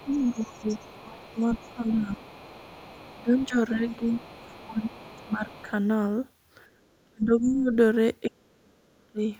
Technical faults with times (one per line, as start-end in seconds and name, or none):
0.00-3.45 other side's voice leaking through
0.05-2.26 speech suppressed in double talk
3.15-5.68 speech suppressed in double talk
3.90-5.62 other side's voice leaking through
7.05-7.72 speech suppressed in double talk
8.29-9.21 speech suppressed in double talk